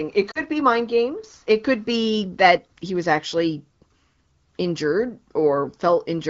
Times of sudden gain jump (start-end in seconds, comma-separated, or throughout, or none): 2.57-2.69